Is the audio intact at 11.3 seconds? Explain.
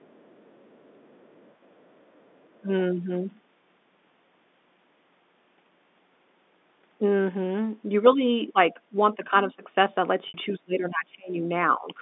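No. From 10.58 to 11.43 s the speech drops by roughly 20 dB, the pattern of speech suppressed in double talk. The echo canceller likely could not separate the near-end talker from the overlapping far-end echo and attenuated the near-end talker along with it.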